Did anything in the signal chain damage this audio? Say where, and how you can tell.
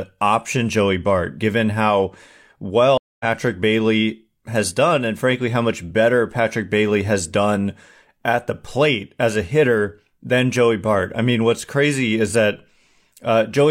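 Yes. At 2.98 s the speech drops into about 220 ms of silence and resumes at 3.25 s roughly a fifth of a second further on, skipping material. That is a network-stage stream reconnect: the link broke, the player reconnected and restarted its decoder mid-stream.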